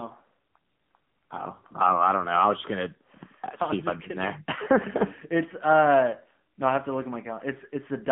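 Throughout, the speech carries AMR narrowband mobile codec damage. The line band runs from 150 Hz to 3.4 kHz, and nothing above 3.5 kHz survives. The bitrate is 7.95 kbps. The vocal-tract model strains at that rate. The voice turns buzzy and plainly synthetic.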